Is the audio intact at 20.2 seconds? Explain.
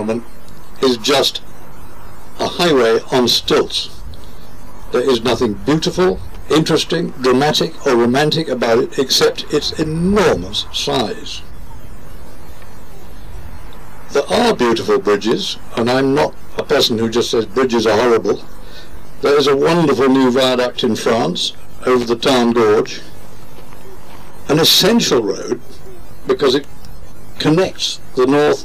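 Yes, the audio is intact at 20.2 seconds, with no fault audible there.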